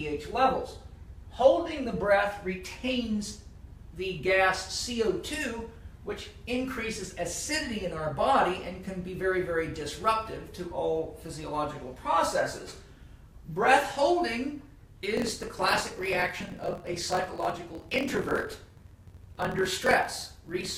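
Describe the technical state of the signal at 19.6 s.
At 19.6 s the signal is inside a block size mismatch (truncated) running from 15.15 s to the end. Each block's tail is discarded, which fits 1024-sample reads, producing a 43.1 Hz buzz and audio running 1.12 times faster with its timbre kept.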